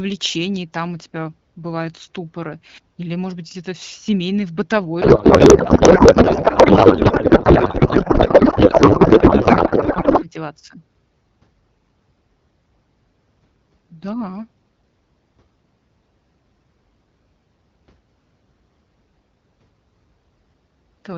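From 5.01 s to 10.27 s, right after "в с семейной в", the speech gives way to a codec payload misread. The decoder takes in AMR-WB frames that look valid but are read with the wrong bit packing, which fits octet-aligned frames being parsed as bandwidth-efficient, so every parameter lands in the wrong field. The result is garbled, warbling noise that barely tracks the speech. On a spectrogram, harmonic striations vanish into smeared broadband texture, and the waveform envelope no longer follows syllables. Outside that stretch, the wideband coding sounds clear, consistent with a 12.65 kbit/s mode.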